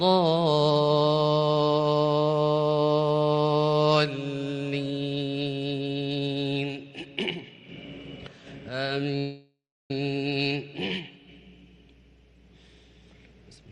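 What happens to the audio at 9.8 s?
At 9.8 s the sound is stalled in a call audio freeze from 9.18 to 9.91 s: the last sound trails off as a fading buzz, then goes silent for about 0.35 s, likely from late packets draining the jitter buffer. Unlike a dropout, nothing is lost, and the audio resumes where it stopped, about 0.7 s late.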